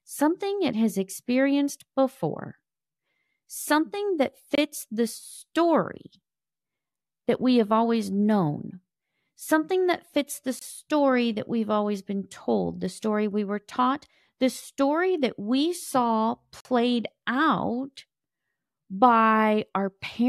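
Gaps between stream segments cut the speech at 4.55 s before "the story", at 10.59 s after "that fits the", and at 16.6 s after "story that we saw". Segment timestamps leave holes filled with silence, heard as hard-edged dropouts of about 25, 22 and 46 ms, recurring every 6 s.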